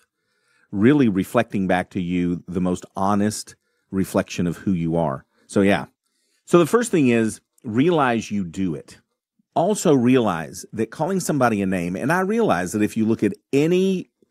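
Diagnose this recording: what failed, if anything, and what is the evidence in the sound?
Nothing failed in this recording, and no stage of the chain leaves an audible mark on the speech. There is no evidence in the sound pointing to any stage, so nothing here calls for further investigation.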